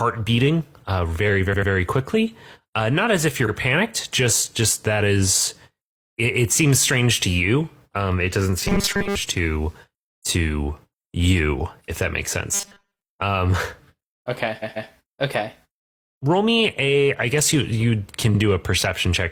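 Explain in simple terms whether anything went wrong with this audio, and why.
Repeated frames occur at 1.49 s (just after "beating uh very"), 3.44 s, 14.59 s and 18.30 s. A short piece of stored speech, about 46 to 139 ms long, was played again, once or twice, so the speech stutters and the clip grows longer by those replays.

Robotic sound from repeated short buffers turns the speech into a stiff, metallic buzz at 8.65 to 9.15 s (between "it doesn't" and "to to you if") and at 12.54 to 13.03 s. New audio likely arrived too slowly, so the player kept looping its last 5 ms, dropping most of the real speech and forcing a steady 200 Hz hum.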